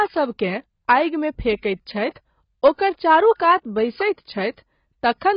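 AAC compression affects the speech throughout. There is nothing above 5.1 kHz, and the sound is dull and heavily smeared, with a warbling, fizzy edge on sibilants. This fits a starved bit budget, likely AAC-LC at about 16 kbps, which forces a low cut-off and coarse quantisation.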